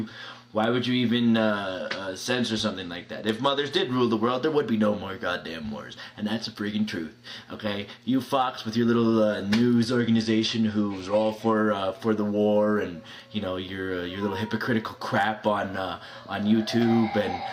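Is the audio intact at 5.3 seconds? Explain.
Yes, the audio is intact at 5.3 seconds, with no dropout, click, distortion or other fault audible at that moment.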